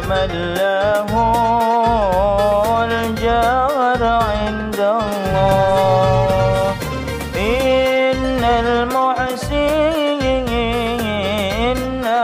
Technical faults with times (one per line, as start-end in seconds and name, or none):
none